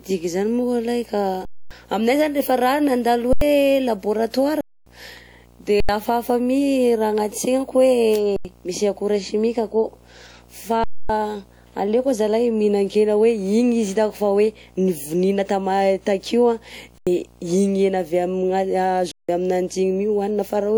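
Running under the whole clip is video or display buzz, a 60 Hz field-rate buzz with hash riding above it, sitting roughly 30 dB below the speech. That's a screen or video cable leaking its field timing into the audio path, so it never lets up.

On top of that there are eight underruns with held sample. The output buffer ran dry, and the converter froze on its last value until data came back, so the waveform goes flat and the speech just stops dead rather than fading. The first is at 1.45 to 1.71 s, 256 ms, right after "moko alahy ka" and before "aminay zany rehefa raha". The others fall at 3.33 to 3.41 s, 4.61 to 4.86 s, 5.80 to 5.89 s, 8.36 to 8.45 s (just before "misy akora chimique akao"), 10.84 to 11.09 s, 16.98 to 17.07 s (after "takeo an"), and 19.12 to 19.29 s. The short ones are 85 ms each, which fits a 4096-sample buffer, and the last is 171 ms, which fits 8192. The others are 256 ms. 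Each time, playback comes back further along than where it stopped, skipping roughly 100 to 300 ms of live speech, so the speech jumps ahead when it resumes.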